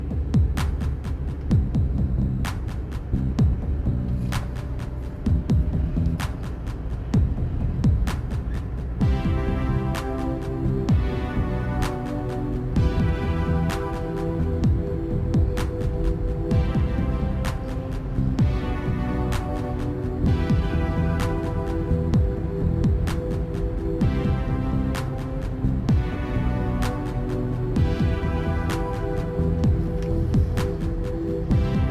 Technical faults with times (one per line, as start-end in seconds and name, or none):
none